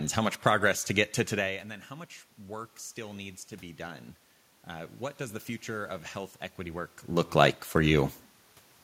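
From 1.88 to 4.15 s and again from 4.68 to 7.0 s, automatic gain rising lifts the level by about 4 dB, then about 3 dB, after the input drops about 16 dB. Voice and room noise swell together, shown as a slow envelope ramp and a brightening noise floor.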